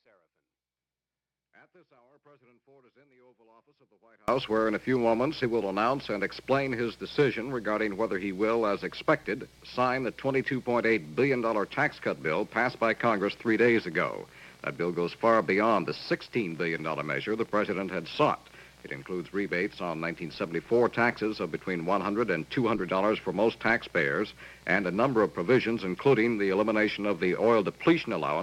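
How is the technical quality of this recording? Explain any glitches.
The recording opens with a fault. An audio dropout to a faint residue is already under way when the clip starts, and it lasts until 4.28 s. For those first seconds the main signal is missing. Only a faint leak of sound remains, roughly 35 dB below normal level. The likely cause is a break in the wanted signal while the path after it stayed live. At 4.28 s the full sound returns abruptly, not as a fade.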